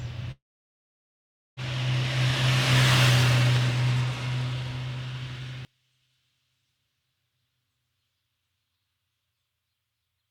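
Long network dropout, 0.31 to 1.60 s: the sound breaks off, and the last fragment is stretched into a short fading buzz before about 1.2 s of near silence takes over. This is most likely a stretch of packets that never reached the receiver, so roughly 1.3 s of material is simply gone. The concealment could only smear out what it last had, and when the audio resumes it picks up later, skipping the lost portion.

One channel inverted, 5.65 s to the end: from this point the sound collapses when heard in mono, dropping by about 35 dB and leaving only a faint residue. The likely cause is one stereo channel flipped in polarity, so the content shared by left and right cancels when they are summed. What survives is just the small difference between the channels, without the body that both sides carried.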